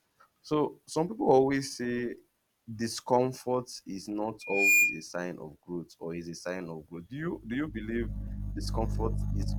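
At 4.41 s the microphone picks up its own loudspeaker, and at 2.4 kHz the loop gain passes one, producing loudspeaker feedback squeal. A pure tone swells over roughly a third of a second to about 10 dB above the speech, then stops at 5.03 s.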